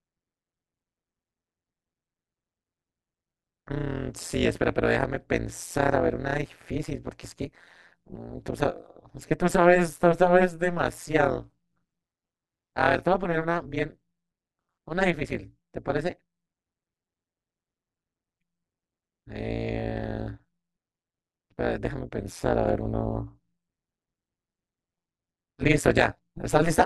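From start to finish the speech carries a harsh, metallic buzz near 150 Hz, with extra tones around the voice, that swings the level by about 60 dB. This is overlap-add ripple: windowed frames were recombined with an overlap that never sums to constant gain, so loudness dips every frame.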